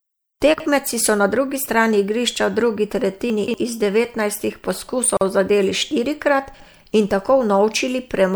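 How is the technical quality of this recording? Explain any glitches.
The speech has two kinds of glitch: three jumbled moments where chunks play out of order, and one short dropout where separately encoded pieces were joined.

Chunks out of order happen at 0.54–0.66 s (just before "so na drugi strani"), 3.3–3.54 s, and 6.54–6.66 s (right after "zadeli štirikrat"). The audio moves in 60 ms chunks, and one chunk arrived late and played after the ones meant to follow it. It was one chunk late in the first and third cases and three chunks late at 3.3 s, which is why that one lasts longer. Nothing is lost, but each spot sounds garbled.

The gap at a join of encoded pieces sits at 5.17–5.21 s, just before "zadeli štirikrat in". The pieces were encoded separately and stitched together without trimming, so the encoder's start-up delay and last-frame padding stay in. You hear a 43 ms hole with smeared edges, and then the speech carries on from where it stopped.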